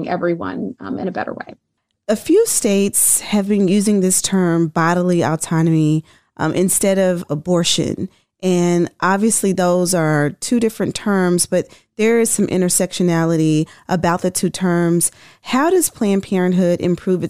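No technical faults are audible anywhere in the speech recording.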